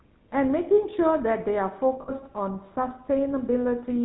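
From start to finish the speech carries the sound of the GSM full-rate codec, and the damage is plainly audible. The coder models the vocal tract and drives it with a sparse, regular pulse train. Only every third excitation sample survives. That leaves a buzzy, gravelly roughness on every voiced sound. Nothing above 4 kHz gets through, so the top end is gone. The character fits the 13 kbps full-rate coder.

From 2.02 to 2.12 s there are lost GSM frames. The decoder had no good data here. It kept replaying the settings of the last good frame. The sound freezes into a rough, metallic ring. The gap fits about 60 ms of missing audio, or roughly three 20 ms frames. The loss is too short to fade fully to silence.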